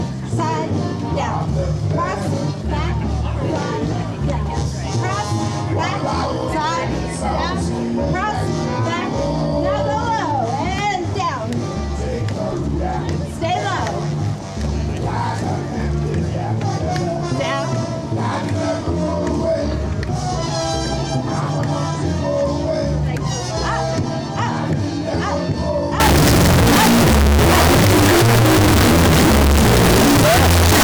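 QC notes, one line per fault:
26.0–30.8 s, float read as integer: the sound abruptly turns extremely loud and harsh, with a nearly square waveform sitting at an almost fixed, high level. Background noise jumps up to the same level as the main sound, yet its pitch contour can still be traced. The likely cause is 32-bit float samples being read as 32-bit integers, so each sample's sign and exponent bits set its level instead of the actual amplitude.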